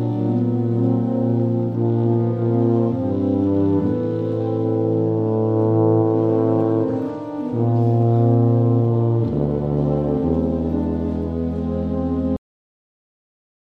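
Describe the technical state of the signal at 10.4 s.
The signal at 10.4 s is intact, with no audible fault at that point.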